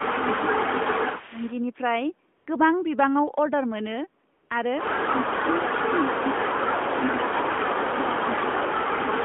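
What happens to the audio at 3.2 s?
Nothing goes wrong at 3.2 s: the speech carries straight through that moment with no dropout, click or distortion, just the narrow, telephone-band sound of the AMR narrowband mobile codec it passes through.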